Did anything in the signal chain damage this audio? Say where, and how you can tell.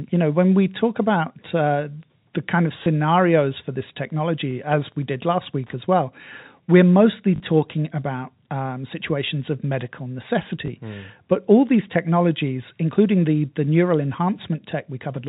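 Yes. At the network stage, the speech stutters briefly three times. After "uh the kind of" it catches from 2.84 to 2.86 s, and from 10.66 to 10.68 s just after "um situations of medical". A longer 40 ms stutter at 7.36 to 7.40 s comes just before "about um situations of". This is packet loss with the last packet repeated. The receiver replayed stale audio to fill the gaps, which points to one lost 20 ms packet at each short spot and two at the longer one.

In the analogue wiring, a faint, steady ticking runs from about 3.79 to 5.86 s at roughly ten ticks a second, sitting roughly 40 dB below the speech. That 102.4 ms spacing is the signature of Wi-Fi interference. A nearby radio's beacon bursts were picked up and rectified by the audio circuit, all through the G.711 telephone path.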